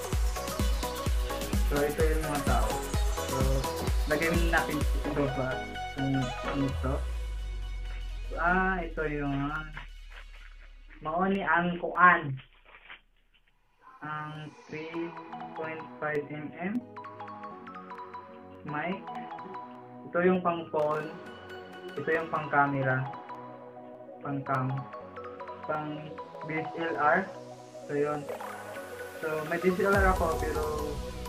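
From 0.56 s to 31.15 s a click recurs every 0.6 s, about fifty in all. Each is a brief discontinuity in the sound, where a short run of roughly fifteen samples goes missing or is repeated. The steady spacing points to clock drift buffer slips as the likely cause. Two clocks disagree by around 500 ppm. The buffer between them drifts until it must jump, and each jump is heard as one click.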